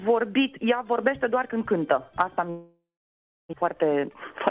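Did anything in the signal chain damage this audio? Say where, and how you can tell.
Yes, at the network stage. Around 2.5 s the sound turns into a fading buzz or hiss, drops to about 0.66 s of silence, and returns near 3.55 s with about 0.72 s simply gone. That's a long network dropout, likely a burst of lost packets the receiver concealed until it gave up.

Right after, from 3.63 s to 4.33 s, there's a jitter buffer speed-up: playback runs at 121% speed with the pitch unchanged, so it sounds hurried. The buffer was catching up on a backlog, trimming pitch-period slices, roughly 150 ms in all, from the G.711 audio, which stops at 4 kHz.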